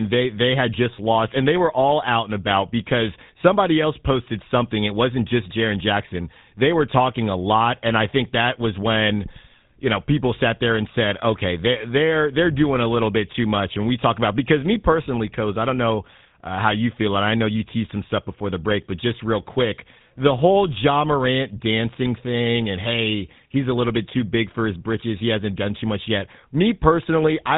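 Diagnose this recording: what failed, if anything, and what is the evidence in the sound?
The codec stage failed: GSM full-rate coding runs through the whole speech recording. Nothing reaches above 3.9 kHz, and a plainly audible buzzy, gravelly roughness sits on the voice, consistent with a 13 kbps full-rate encoder rebuilding speech from a vocal-tract model driven by sparse, regularly spaced excitation pulses.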